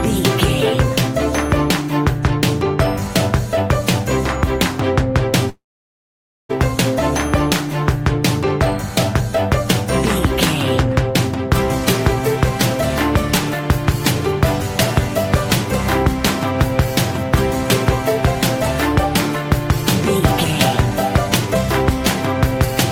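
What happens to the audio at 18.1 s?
Nothing goes wrong at 18.1 s; the audio plays through that moment intact, with no dropout, click or distortion.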